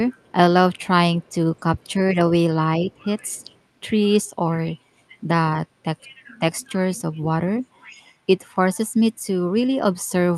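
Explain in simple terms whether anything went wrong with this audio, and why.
Two things went wrong.

The first is an echo leak. The other side was most likely using a loudspeaker, and its echo canceller didn't fully remove what its microphone picked back up. That leftover sound was sent back down the line. You hear a very faint copy of the speech trailing about 268 milliseconds behind the original, from 0.18 to 0.86 s, briefly at 1.78 to 1.93 s, and again from 2.91 to 3.58 s.

The second is speech suppressed in double talk. When both people talked at once, the echo canceller likely couldn't tell the local talker apart from the loudspeaker echo, so it turned everything down together. The speech sharply dips or drops out in short pieces between 1.25 and 2.32 s, 4.81 and 5.10 s, 5.68 and 6.00 s, and 7.19 and 7.52 s. The last of these is the deepest dip, though also the shortest.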